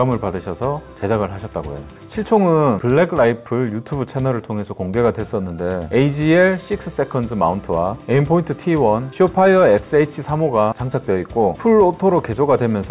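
No technical faults are audible in this recording.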